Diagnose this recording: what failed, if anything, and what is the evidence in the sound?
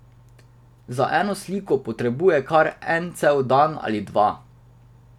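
Nothing in this speech recording points to a failure at any stage of the chain. No dropouts, clicks, distortion or timing disturbances can be heard anywhere in the clip.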